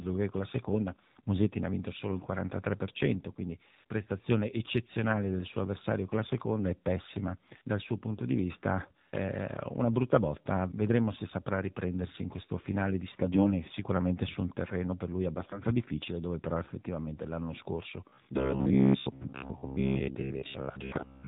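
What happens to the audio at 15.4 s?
From 15.38 to 15.65 s, about a quarter second, the speech shows AMR bit errors. The span fits roughly fourteen damaged 20 ms frames at a bit error rate of around 4 percent. Flipped bits in the weakly protected part of each frame misplace the excitation pulses and skew the fine pitch, gain and spectral parameters, while the protected core survives. The voice holds its approximate pitch and loudness but goes hoarse, scratchy and gargly for that stretch.

Underneath, as across the whole clip, the speech is carried by the AMR narrowband mobile codec at 7.4 kbps, and its damage is plainly audible. The codec samples at 8 kHz and rebuilds speech from a vocal tract model fed by a pitch predictor and a small number of pulses every 5 ms. Nothing above 4 kHz survives, and at this bitrate the voice takes on a buzzy, synthetic quality.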